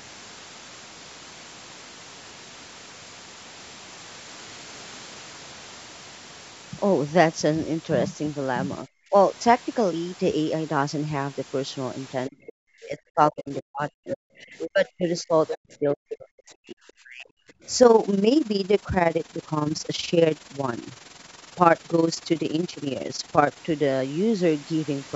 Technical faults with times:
8.83-9.14 speech suppressed in double talk
12.28-17.30 speech suppressed in double talk
12.46-12.50 other side's voice leaking through
14.12-14.17 other side's voice leaking through
14.58-14.68 other side's voice leaking through
15.18-15.57 other side's voice leaking through
17.58-17.63 background gated by the echo canceller
17.83-23.62 overlap-add ripple

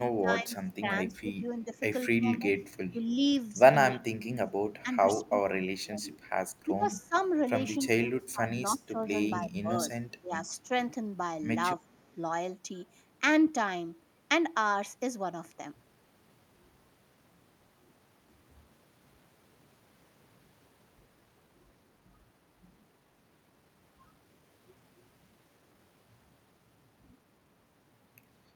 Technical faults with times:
0.00-3.07 speech suppressed in double talk
3.91-7.16 speech suppressed in double talk
6.18-6.30 echo leak
7.14-7.26 echo leak
7.83-10.73 speech suppressed in double talk
11.78-11.82 speech suppressed in double talk
11.89-12.15 echo leak

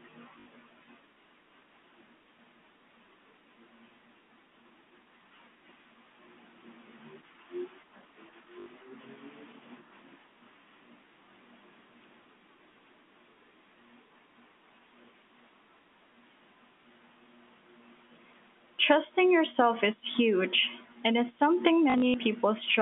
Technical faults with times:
0.40-0.46 packet loss with last packet repeated
8.60-8.66 packet loss with last packet repeated
20.12 packet loss with last packet repeated
21.90-22.14 packet loss with last packet repeated

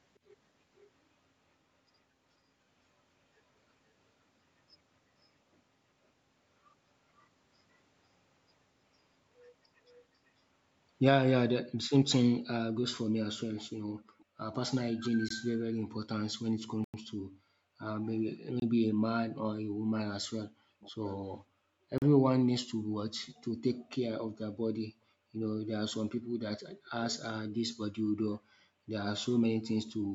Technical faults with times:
0.76-0.90 echo leak
9.93-9.99 echo leak
11.66-30.15 background gated by the echo canceller
14.20-14.55 echo leak
15.28 Bluetooth stall
16.84-16.94 Bluetooth stall
18.60-18.62 Bluetooth stall
20.80-23.36 echo leak
21.98-22.02 Bluetooth stall
26.86-26.91 echo leak

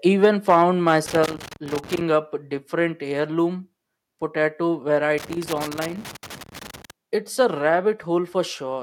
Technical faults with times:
0.23-0.61 microphone overload
0.25 microphone volume stepped down
0.87-0.94 microphone overload
1.06-2.01 loose connector crackle
1.26 microphone volume stepped down
5.18-6.90 loose connector crackle

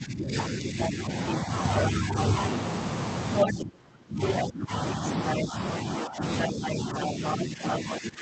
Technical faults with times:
0.00-2.16 speech suppressed in double talk
0.83-1.33 other side's voice leaking through
2.26-2.30 other side's voice leaking through
3.37-3.53 other side's voice leaking through
3.45-8.21 speech suppressed in double talk
4.27-4.42 other side's voice leaking through
6.02-8.21 other side's voice leaking through

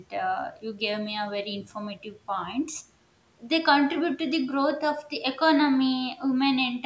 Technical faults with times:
none

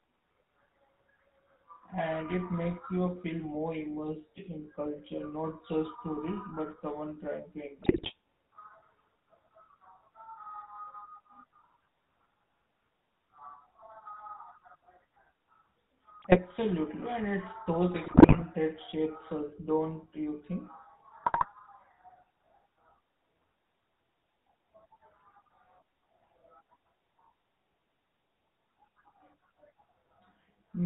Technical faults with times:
0.00-30.86 GSM full-rate codec
7.82-8.13 GSM bit errors
16.19-16.39 GSM bit errors
18.04-18.43 GSM bit errors
21.24-21.47 GSM bit errors

